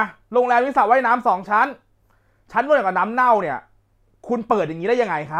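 No technical faults are audible.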